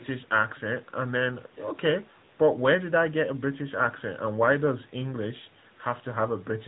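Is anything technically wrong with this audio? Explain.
Yes. Throughout, the speech sounds buzzy, synthetic and dull, with nothing above 4 kHz. This is AMR narrowband mobile codec damage, consistent with a 10.2 kbps mode rebuilding the voice from a coarse vocal-tract model.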